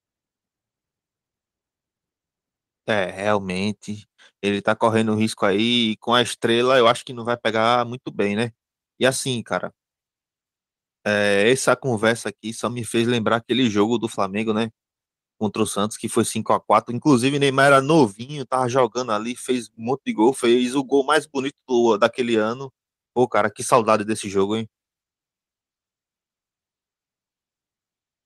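No technical faults can be heard anywhere in the recording.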